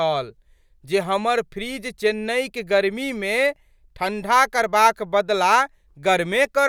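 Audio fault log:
No technical faults can be heard anywhere in the speech signal.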